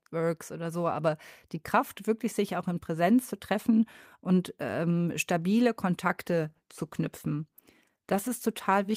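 Right after "treffen und ähm stabile", at 6.19 s, there's a call bitrate drop that lasts to the end of the clip. The encoder starves, so the speech goes coarse and muffled as the highs vanish, which fits a fall from 40 to 16 kbps.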